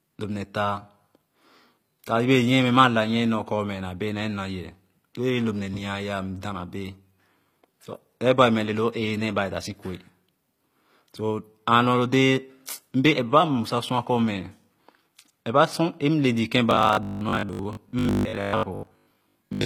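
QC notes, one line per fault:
Throughout: HE-AAC compression, plainly audible. The treble sounds synthesized rather than captured, likely from spectral band replication at a low bitrate near 24 kbps. Copied upper bands misalign with the true harmonics, roughening and thinning sibilants.
16.71 to 19.65 s: robotic sound from repeated short buffers. A rigid 50 Hz buzz runs through the speech to the end. That points to a 20 ms block being replayed, with roughly half the audio repeated instead of new, likely from audio arriving too seldom.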